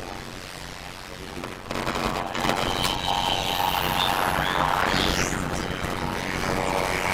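Throughout, a block size mismatch (padded) zero-fills each short block, fitting 256-sample writes, causing a 91.9 Hz buzz and 0.533x speed, yet timbre stays, unlike slowed playback.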